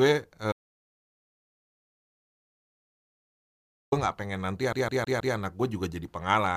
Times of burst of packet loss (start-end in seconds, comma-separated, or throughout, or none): none